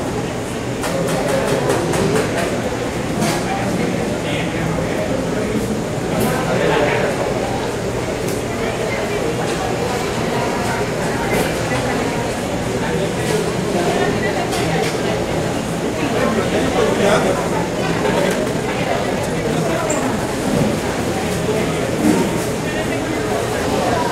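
A time-stretched section runs from 17.69 to 20.29 s. The pace there jumps to about 1.46 times normal while pitch stays unchanged, leaving the audio rushed. This is likely software compressing the passage by dropping short slices to fit a shorter length.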